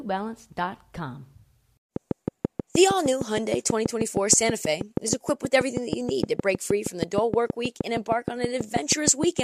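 A speech recording with a train of clicks from about 1.96 s to 9.40 s, likely caused by interference from nearby equipment or a faulty connection or power supply injecting a pulse at a regular rate. Some fifty similar clicks arrive at about 6.3 per second, each peaking roughly 15 dB above the speech, heard as steady ticking over the talking and through the pauses.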